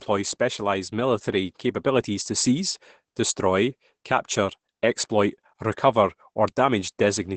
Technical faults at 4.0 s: Opus compression

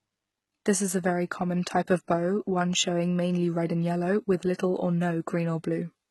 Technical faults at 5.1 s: HE-AAC compression

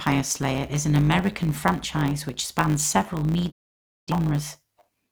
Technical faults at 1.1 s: block size mismatch (truncated)

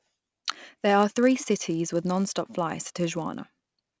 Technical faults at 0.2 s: resampler restarted on every block

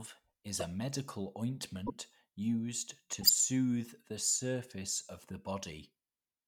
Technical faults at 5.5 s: none

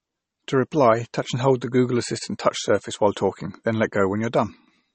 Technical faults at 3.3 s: low-bitrate audio saved at a high bitrate

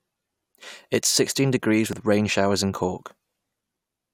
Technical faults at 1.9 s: overlap between stream segments

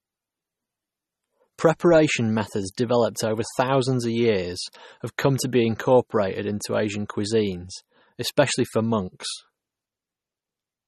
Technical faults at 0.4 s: MP3 compression

